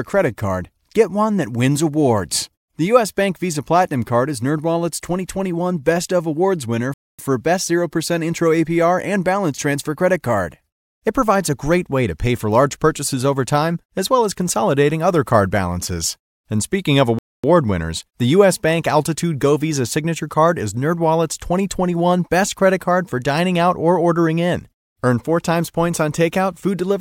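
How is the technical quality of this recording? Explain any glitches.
The speech is interrupted twice by a gap between chunks, at 6.94–7.19 s and 17.19–17.44 s, the second right after "speaking of" and before "winners the". Each is a 250 ms silence, 10.25 s apart, inserted between stored chunks. Unlike a dropout, nothing is lost: the sound resumes exactly where it stopped.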